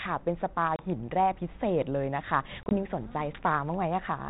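At 0.76 s and again at 2.63 s, packet loss on an ADPCM call punches hard-edged silent holes into the speech. The first drops 30 ms. The second loses 50 ms, scattered over 80 ms. Each time the decoder's predictor falls out of step, so speech returns with brief distortion.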